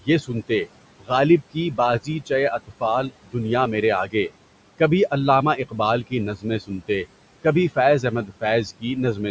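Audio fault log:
Throughout: noise suppressor artifacts. The suppressor judges which frequency bands hold steady room noise and pulls them down by about 18 dB frame by frame. The room noise, about 17 dB under the speech, sinks in the gaps and comes back beneath each phrase, so the background pumps.
0.01–0.68 s, 1.00–1.11 s, 1.53–3.35 s, 4.06–4.31 s (just before "کبھی علامہ"), 5.57–6.90 s (just after "کبھی علامہ"), 7.44–8.84 s: speech cut by the noise suppressor. Quiet parts of the speech were mistaken for noise and dropped by about 15 to 18 dB, about 100 to 400 milliseconds in each span, so syllables sound swallowed or faint.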